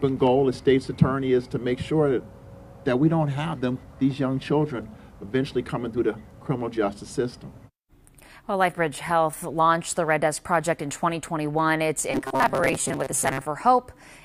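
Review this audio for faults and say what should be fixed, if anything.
From 12.12 to 13.45 s, robotic sound from repeated short buffers: a rigid 133 Hz buzz, likely one 7.5 ms block replaying over roughly half the audio. Enlarge the input buffering so fresh audio always arrives before the previous block is exhausted.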